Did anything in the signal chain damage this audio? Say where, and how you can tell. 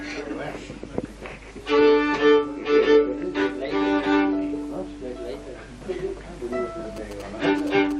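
Yes. From 6.97 to 7.93 s, galloping ticks and short 217 Hz buzzes are heard. These are GSM signalling bursts from a nearby phone, rectified in the analogue wiring.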